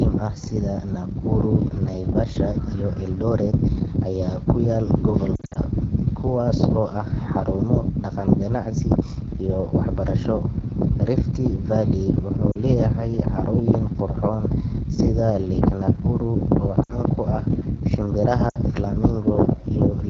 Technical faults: AMR wideband (HD Voice) codec; lost AMR speech frames

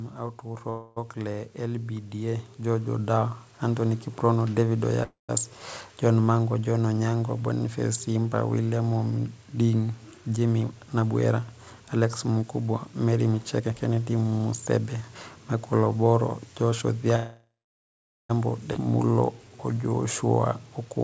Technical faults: automatic gain rising; call audio freeze; jitter buffer speed-up; skip ahead; jitter buffer slow-down

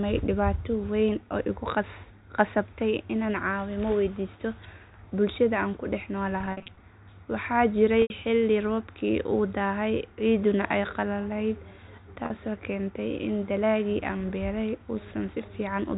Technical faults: packet loss with pitch repetition

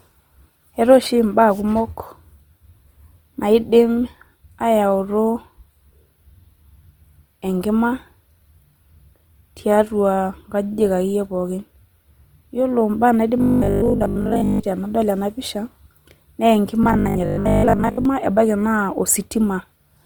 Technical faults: Opus compression; robotic sound from repeated short buffers

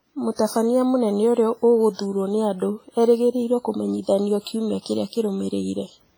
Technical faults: WMA compression; pre-echo

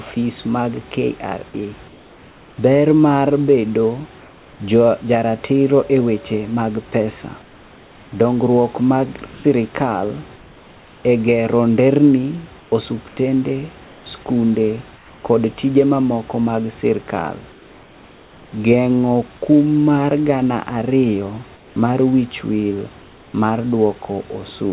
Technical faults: comfort noise in place of the background

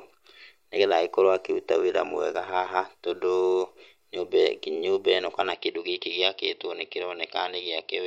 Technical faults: input switched to a poorer device

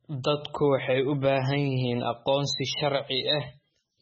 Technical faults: MP3 compression

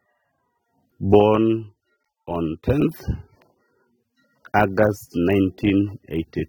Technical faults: low-bitrate audio saved at a high bitrate

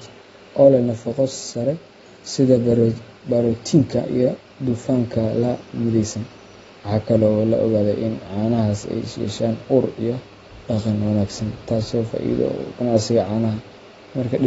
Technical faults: AAC compression

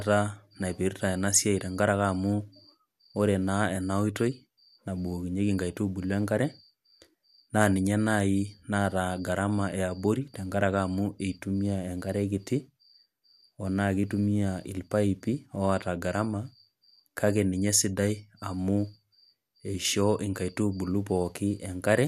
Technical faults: none

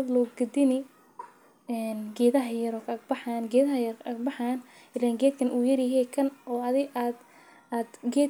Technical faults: none

